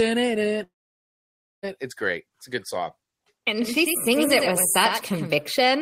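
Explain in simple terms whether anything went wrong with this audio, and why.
Two things go wrong. At 0.63 s the speech cuts to a brief fading buzz, then near silence until 1.65 s, likely a long network dropout losing about a second of audio.

From 3.62 s to 5.36 s, a slightly quieter echo trails everything by about a tenth of a second, starting and stopping abruptly. This is a doubled audio track: the same sound was mixed in twice.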